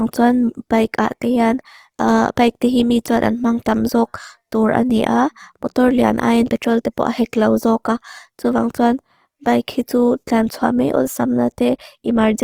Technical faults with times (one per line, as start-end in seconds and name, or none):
0.00-12.44 Opus compression